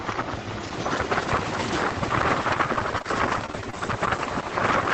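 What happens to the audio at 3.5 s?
At 3.5 s the audio is in the middle of a stretch of repeated packet loss (robotic sound), running from 2.73 to 3.75 s. Data kept going missing in short holes, the longest about 25 ms, and each was patched by extending the preceding sound, so roughly 150 ms ends up rebuilt. Unlike a single dropout or steady codec warble, this is a rapid, uneven chop with a robotic edge that recurs throughout that one-second span.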